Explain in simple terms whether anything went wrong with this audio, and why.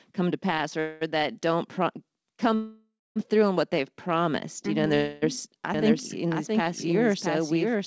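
The speech stalls into a fading buzz three times: from 0.80 to 1.03 s after "come to pass", 2.55 to 3.18 s before "through on what" (briefly going silent), and 4.94 to 5.24 s. This is a call audio freeze, likely from packets arriving late.

From 5.74 s to the end, a second, quieter copy of the speech runs about 0.7 s behind. This is a doubled audio track, likely from the sound being captured twice.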